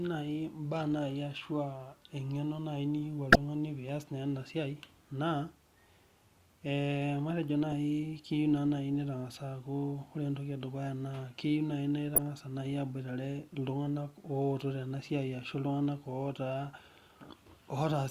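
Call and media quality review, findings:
Corrupt frame decoded, three times: a glitch at 3.32–3.36 s, a glitch at 7.72 s, a glitch at 12.14–12.18 s. Loudest is the first, peaking around -10 dBFS; the 7.72 s one is way down near -25 dBFS. Probable component is the speech decoder: flipped bits in a few frames got decoded anyway, so misread gains and codes dumped energy at wrong frequencies for roughly each bad frame's length.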